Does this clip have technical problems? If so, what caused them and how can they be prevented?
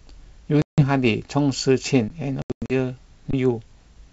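Yes. Packet loss on an ADPCM call leaves hard-edged silent holes at 0.62–0.82 s (160 ms) and scattered over 2.42–2.74 s (220 ms lost, longest run 100 ms). The restarting predictor desynchronises, so the speech returns slightly distorted, as sharp vertical edges on a spectrogram. Packet-loss concealment with decoder-state resync prevents this.

An underrun with a held sample appears at 2.08 s and at 3.31–3.33 s (about 23 ms, which fits a 1024-sample buffer). The waveform flattens, then resumes after roughly 20 ms of audio was skipped. A larger output buffer prevents it. The G.722 wideband layer beneath these faults sounds clean.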